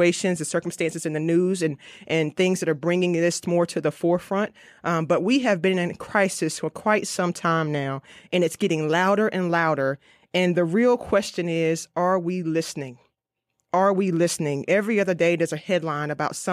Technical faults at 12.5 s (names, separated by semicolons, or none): none